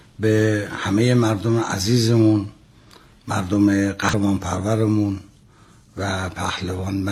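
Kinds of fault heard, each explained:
Damaged data in a compressed stream: a brief glitch from 4.09 to 4.14 s. Corrupted bytes there make the decoder misread the frames, lose sync and skip forward to the next valid frame header.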